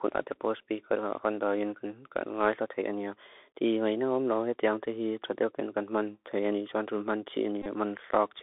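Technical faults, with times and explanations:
Throughout: Bluetooth CVSD headset codec. The 64 kbps delta coder limits the line to about 300 Hz to 3.6 kHz. S sounds turn scratchy, with granular hiss beneath.
4.86 s: Bluetooth headset packet repeated. About 7.5 ms of lost audio is refilled by reusing the previous packet's bits, giving a brief tick.
7.62–7.66 s: Bluetooth headset packet repeated. Repeats scattered over about 38 ms, with a run near 30 ms. The 3.75 ms repetition produces a short buzz near 267 Hz.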